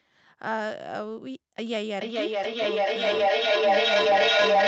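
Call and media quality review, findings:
Feedback echo between two devices, 1.95 s to end: second device replays this mic's signal, echo canceller misses it; repeats roughly every 0.4 s, building to about 11 dB above speech.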